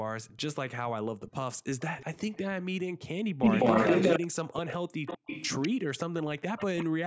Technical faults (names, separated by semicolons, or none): echo leak; background gated by the echo canceller; speech suppressed in double talk